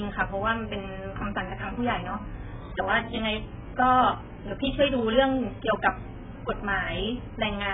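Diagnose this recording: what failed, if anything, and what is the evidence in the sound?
The failure is at the codec stage: AAC compression across the whole recording. Nothing survives above 3.7 kHz, so the speech sounds dull and band-limited, and the heavy smearing and warbly sibilants point to AAC-LC likely run at a very low bitrate, around 8 kbps.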